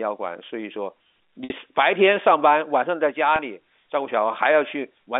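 Over a telephone-band line (G.711, nothing much above 3.6 kHz), there's packet loss with pitch repetition in two spots. At 1.44 to 1.50 s about 60 ms goes missing, which fits two packets. The receiver loops the last pitch cycle and fades it, so the sound briefly smears into a buzzy hold, drops out, then cross-fades back in. At 3.36 to 3.39 s a shorter 30 ms gap, about one packet's worth, just comes across as a quick held buzz.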